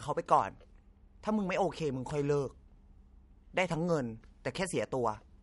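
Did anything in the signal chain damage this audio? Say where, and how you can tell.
Yes: throughout, the speech sounds watery and swirly, with nothing above 11.2 kHz; likely MP3 compression at the codec stage, fitting a starved bitrate near 48 kbps.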